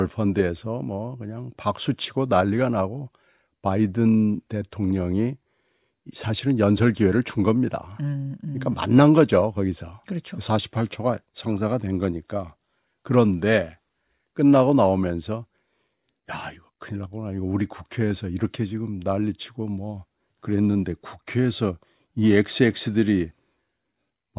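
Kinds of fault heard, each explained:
No technical faults can be heard in this speech recording.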